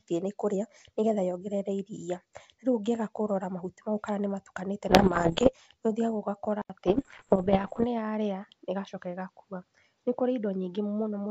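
A speech recording carried over a G.722 wideband link, with bit errors on the ADPCM link from 4.89 to 5.53 s and again from 6.87 to 7.85 s. Flipped bits throw off the decoder's predictor and step size, producing pops and rough, level-jumping bursts, at an error rate of around 2 percent, then 1 percent. At 6.62 s an 80 ms gap is followed by duller sound with nothing above 6.2 kHz, a new noise floor about 45 dB down, and little level change, likely from the input switching to a poorer device.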